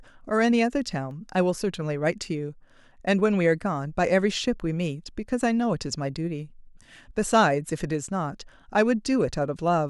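A speech recording with CD scratch ticks near the start. Four short ticks fall between 0.74 and 1.30 s, about five per second. Each is a tiny click or dropout, the longest only a couple of milliseconds. The regular spacing points to a scratch or blemish on the disc, hit once per revolution. There the damage exceeded what error correction could rebuild. The player then interpolated or muted the lost samples, leaving these brief ticks.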